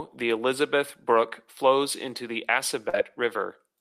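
At 2.89 to 2.95 s, short concealed packet loss: 40 ms of the speech never reached the decoder in time, so the receiver patched 37 ms by extending the preceding sound, leaving a brief smear.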